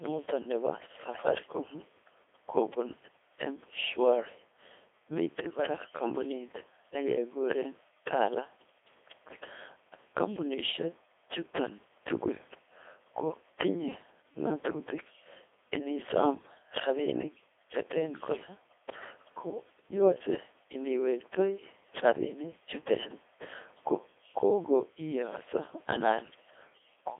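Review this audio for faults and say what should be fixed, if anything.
Throughout, a Codec 2 vocoder rebuilt the speech from pitch and envelope alone, in a 300 Hz to 3.5 kHz band that fits 2.4 kbit/s, leaving it heavily robotic and buzzy. To prevent it, record or transmit through a waveform codec at a higher bitrate rather than a low-rate vocoder.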